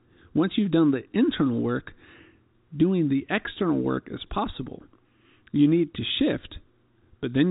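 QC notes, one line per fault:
No faults found in this speech clip. It has passed through G.711 A-law telephone coding at 64 kbps, which leaves nothing above about 3.8 kHz, and what the coding adds is faint or not heard at all.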